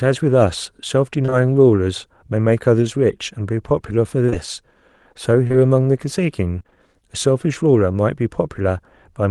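Short concealed packet loss appears at 1.25 to 1.34 s, 4.26 to 4.34 s and 5.48 to 5.55 s, each a pair of back-to-back 20 ms holes. The decoder extends the preceding sound to cover them, giving a brief smear or wobble where material briefly drops out.

Repeated packet loss (robotic sound) runs from 6.59 to 6.73 s: four separate 20 ms gaps close together, with concealment covering about 44% of that stretch. The successive patches make the speech choppy, with fragments missing.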